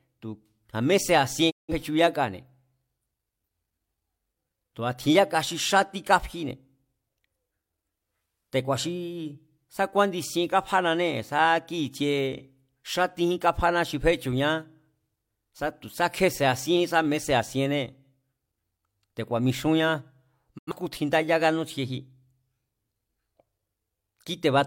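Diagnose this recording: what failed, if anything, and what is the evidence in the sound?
Digital broadcast dropout in the receiver's frame decoding, at 1.50 to 1.74 s and again at 20.57 to 20.73 s. Each time the speech fades out over about 20 ms into silence, then resumes with "tjin ndáyá kánútsjieji" after the second hole. The gaps hold about 171 ms and 85 ms of lost programme, which fits whole frames of roughly 43 ms being discarded. The receiver muted until valid frames arrived again.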